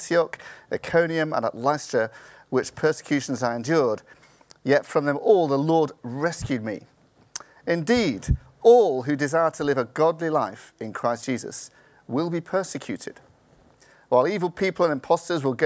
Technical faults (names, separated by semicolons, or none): none